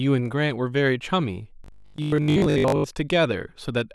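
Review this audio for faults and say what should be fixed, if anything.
From 1.64 to 2.84 s the speech collapses into that robotic sound from repeated short buffers, a stiff metallic buzz sitting at 50 Hz that only loosely tracks the talking. It's likely a playback starved of fresh audio, looping the last chunk over and over while most of the real signal gets dropped. A 50 Hz buzz fits a 20 ms buffer being recycled. To prevent it, give the audio path a deeper jitter buffer or higher scheduling priority so new data arrives before the last block runs out.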